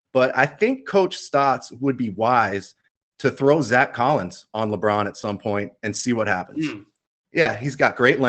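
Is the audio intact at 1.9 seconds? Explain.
Yes, the speech at 1.9 seconds comes through intact, with nothing beyond the ordinary band-limited character of the Opus call path it travelled over.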